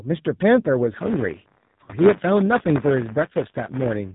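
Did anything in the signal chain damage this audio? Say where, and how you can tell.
Yes, at the codec stage: the AMR narrowband mobile codec makes the whole clip buzzy and synthetic. The spectrogram is empty above 4 kHz, which fits its 8 kHz sampling, and the low 7.4 kbps mode accounts for the buzz.

At the network stage, lost AMR speech frames from 1.84 to 1.91 s make the decoder stretch old settings with falling gain. The result is a smeared 40 ms waveform dip, consistent with two lost frames.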